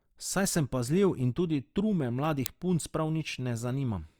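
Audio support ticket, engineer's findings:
Uninitialised buffer at 2.46 s, just before "punc prav": one very short, loud crack. A block that fits 32 samples, about 0.67 ms, got played before any audio was written to it, so leftover memory came out as samples. Check the playback buffer fill order.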